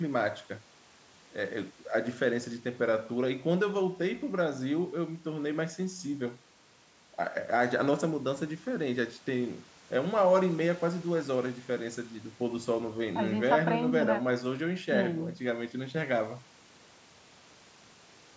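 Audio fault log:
No faults detected.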